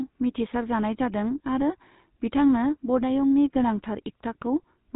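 Speech runs through the GSM full-rate codec from start to finish, and the damage is plainly audible. The codec rebuilds the vocal tract from a filter model and drives it with a sparse pulse train that keeps only every third excitation sample, so the voice comes out with a buzzy, gravelly roughness. Nothing survives above 3.8 kHz, which dulls sibilants and consonants. The coarseness fits a 13 kbps full-rate stream.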